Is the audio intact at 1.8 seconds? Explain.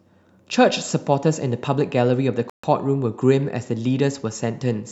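Yes, the audio is intact at 1.8 seconds, with no fault at that moment.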